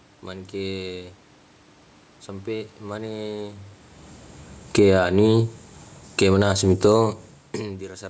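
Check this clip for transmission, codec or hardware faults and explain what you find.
Two gain-control faults appear in the second half of the clip, both from the automatic gain control pumping the level up and down.

Automatic gain falling, 4.63 to 5.06 s and 6.03 to 7.72 s: the control judged the input too loud, or its background noise too strong, and cut gain by about 11 dB, then about 4 dB, so the speech and background sink together.

Automatic gain rising, 4.97 to 5.64 s and 6.42 to 7.35 s: the control raised gain by about 9 dB, then about 5 dB. The second rise answers an input drop of about 23 dB, so the speech and room noise swell back up together.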